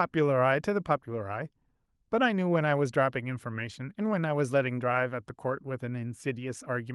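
Nothing stood out on listening to the speech in this recording.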